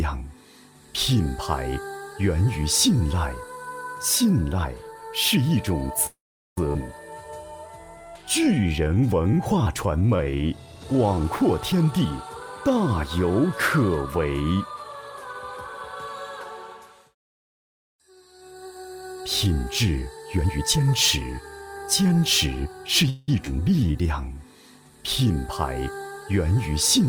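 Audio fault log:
6.06–6.58 s, call audio freeze: packets were likely held up, so the last sound trails off into about 410 ms of silence, adding 506 ms with nothing lost.
6.73 s, skip ahead: about 400 ms of audio is dropped, and playback jumps forward with the two sides joined almost directly.
7.11–11.16 s, jitter buffer slow-down: repeated pitch periods add 340 ms to rebuild the buffer reserve, so the audio runs at 92% speed at unchanged pitch.
11.20–12.77 s and 20.17–23.04 s, jitter buffer speed-up: short pitch-period pieces, roughly 200 ms each time, are trimmed to shrink the delay, running at 112% then 108% speed, same pitch.
23.10–23.29 s, call audio freeze: a likely packet hold-up makes the last sound continue as a fading fill for 181 ms, inserting a gap without losing any audio.
23.45 s, skip ahead: about 100 ms is discarded, and the audio jumps forward with a near-seamless join.
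23.80–24.35 s, jitter buffer slow-down: 101 ms of repeated pitch periods stretch this stretch to 84% speed at the same pitch, sounding drawn out.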